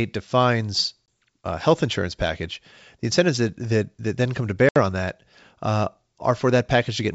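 Packet loss on an ADPCM call silences 1.06–1.08 s, before "a uh health insurance", and 4.69–4.79 s, after "that then come to". The lost packets leave hard-edged holes, and the decoder's predictor falls out of step.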